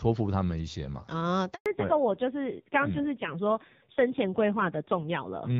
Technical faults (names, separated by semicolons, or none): handover gap; fallback to narrowband